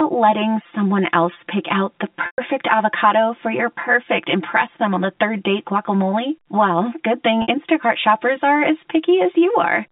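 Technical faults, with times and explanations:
Throughout: channel delay (comb filtering). One channel arrives roughly 5 ms late, and summing to mono cancels shared content at evenly spaced frequencies starting near 100 Hz, making the speech hollow and phasey. On a spectrogram, fixed horizontal notch stripes run the whole clip's length.
2.26–2.38 s and 7.42–7.48 s: packet loss with pitch repetition. After "else pick out the" a 120 ms gap is bridged by repeating the last pitch period, fading toward silence before "avocado for your perfect". After "good thing" a 60 ms loss gives a brief held buzz before "shoppers are as". The waveform shows identical repeating cycles with decaying amplitude, and the spectrogram shows frozen harmonics.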